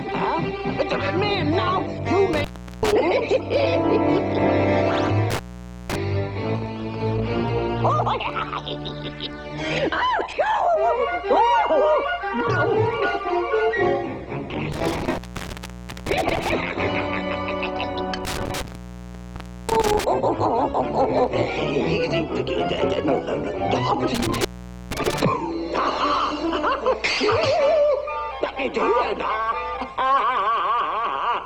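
Intermittent contact appears five times: 2.33–2.93 s, 5.30–5.96 s, 14.72–16.52 s, 18.25–20.04 s and 24.15–25.21 s. A loose cable or plug in the signal path briefly loses its connection, so the audio drops out or breaks up, with crackle at the edges where the contact scrapes open and shut. The line stays open for about 383 ms, 503 ms, 886 ms, 1.07 s and 468 ms respectively.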